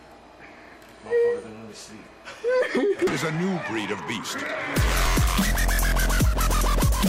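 Damaged data in a compressed stream at 5.06 s makes the decoder misread a frame and resync on the next header, leaving a brief blip in the audio.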